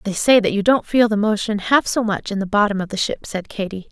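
Nothing in this bit of speech stands out as a technical fault, so there's nothing to flag here.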